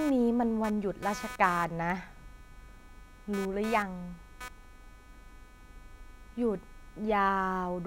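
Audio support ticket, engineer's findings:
Computer activity noise, present throughout. Buzzing/chirping at a rough 300 Hz pulse rate, around 20 dB below the speech, varying with computer activity, not with speech. Processor, graphics or mouse load shifts modulating the shared audio ground. Check grounding/isolation.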